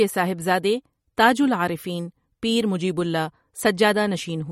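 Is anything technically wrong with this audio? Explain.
Yes. Throughout the speech there is plainly audible MP3 compression, likely from an encoder short of bits, which fits a low bitrate around 48 kbps. Weak frequency lines switch on and off between frames, so the sound turns watery and swirly, and nothing remains above 16 kHz.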